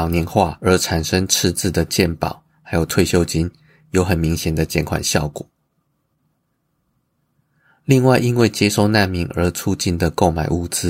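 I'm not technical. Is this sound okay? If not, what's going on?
No. At 8.41 s there is one sharp click in the speech. This is most likely dropped samples: a tiny sliver of the recording, well under a millisecond, went missing. The sound jumps ahead abruptly, and that sudden jump is what you hear.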